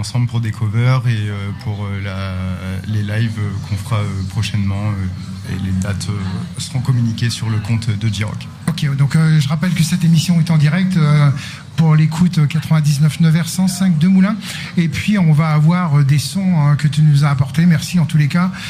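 No technical faults can be heard anywhere in this recording.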